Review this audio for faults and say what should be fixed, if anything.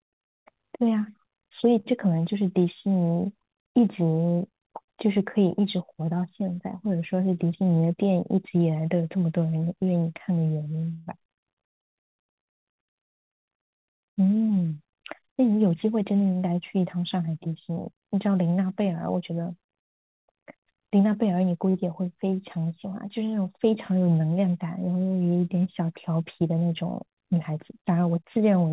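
Short stall from a late packet, at 1.80 to 1.87 s and 21.70 to 21.76 s: the sound hangs for an instant with a faint buzz, held for about 45 ms and 42 ms. A packet arrived late, the jitter buffer ran dry, and the receiver stretched the last sound until it came, so nothing was lost. A slightly deeper target buffer would absorb late arrivals of this size.

Jitter buffer speed-up, at 7.43 to 7.91 s (109%), 14.20 to 14.87 s (111%), 17.28 to 18.06 s (107%) and 27.74 to 28.07 s (111%): the audio briefly sounds hurried while the pitch stays the same. Each time the buffer had built up excess delay, and the receiver trimmed a few tens of milliseconds by dropping short pitch-period pieces. Smoother delivery from the network, or a gentler buffer adaptation policy, would reduce these catch-up bursts.

Call audio freeze, at 10.93 to 11.09 s: the sound turns into a stretched, fading buzz for about 135 ms, with no true silence, then resumes where it stopped. 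The likely cause is packets held up in transit, which emptied the buffer, so the receiver filled the gap with concealment. Reducing network congestion or jitter on that link would prevent these longer waits.

The call path itself carries nothing above 4 kHz, which fits a narrowband G.711 codec at 64 kbps.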